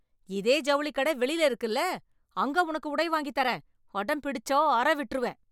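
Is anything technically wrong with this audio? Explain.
No, nothing technically wrong can be heard in this speech recording.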